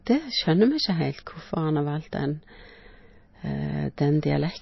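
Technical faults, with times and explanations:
Throughout, MP3 compression: nothing reaches above 5.8 kHz, so the speech sounds dull and boxed-in, and a plainly audible watery swirl hangs on it. That is likely a heavy MP3 encode, and the damage fits a bitrate near 24 kbps. With so few bits, the encoder drops the treble at a fixed point and keeps switching weak frequency lines on and off between frames. A spectrogram shows a flat, hard ceiling at 5.8 kHz, with speckled, flickering holes in the energy below it.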